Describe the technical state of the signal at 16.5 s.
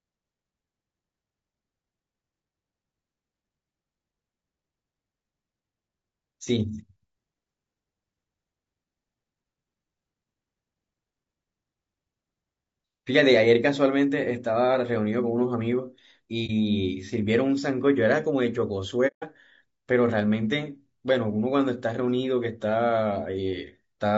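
At 16.46 to 16.51 s the speech drops into a brief dip consistent with AAC frame loss with muting and a single lost frame. The decoder zeroes that frame's spectrum, and the overlapping windows fade the sound out and back in. On a waveform it is a smooth taper to silence and back, and on a spectrogram a narrow blank vertical band across all frequencies.

Through this moment the speech is rough and grainy, with noise filling the gaps between pitch harmonics and a thin, synthetic-sounding top band, likely from low-delay AAC compression (AAC-ELD) at a rate that fits around 32 kbps. A spectrogram shows smeared harmonics, speckled energy between them, and a patchy upper band.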